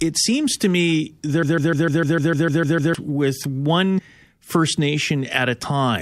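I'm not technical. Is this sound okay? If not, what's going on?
No. Right after "seems to me", from 1.43 to 2.95 s, a broken-record loop plays. A 150 ms scrap repeats ten times. The playback likely stalled there.

At 3.97 to 3.99 s, compressed frames were skipped. About a tenth of a second is missing, roughly five 23.2 ms chunks.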